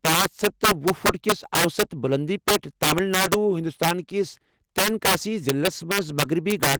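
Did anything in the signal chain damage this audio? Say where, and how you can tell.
Yes. Loud peaks throughout the speech break into violent, harsh cracks, far sharper than ordinary clipping. This is integer overflow at a gain or sample-format stage: the signal was driven about 8 dB past full scale, and a few percent of samples wrapped to the opposite sign instead of being limited.

The timing is also faintly unsteady across the whole clip, with small hiccups at uneven intervals. This points to clock drift between sender and receiver, introduced at the network buffer stage. The sender's clock runs roughly 1 percent slow, so the receiver's jitter buffer keeps draining and must be refilled.

Those refills are heard as repeated timing corrections from 0.74 to 5.88 s. Short pieces are repeated, always in the same direction, and the playback settles at 99 percent speed. Together they stretch the audio by something like 70 ms, which gives the tempo its slight stutter.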